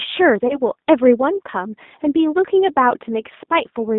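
Throughout, the speech passes through a G.729 codec, likely G.729A at 8 kbit/s, modelling the voice with a filter and sparse pulses, leaving it rough, synthetic, and confined to 200 Hz–3.7 kHz.

From 0.48 to 0.60 s, packet loss concealed by the speech codec: about 20 ms of audio went missing, fitting one lost packet, and the decoder extrapolated, producing a fading smear with weak, distorted recovery.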